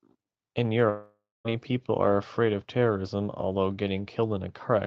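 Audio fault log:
0.89–1.47 s, long network dropout: the speech carries on as a buzzy tail that fades out, leaving about 0.22 s of silence before the speech resumes with that stretch missing, likely a network outage. Unlike a brief packet-loss glitch, the filler decays completely.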